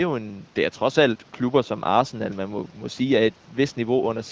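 No technical faults are audible.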